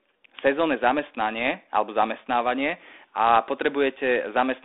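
Nothing here is faulty.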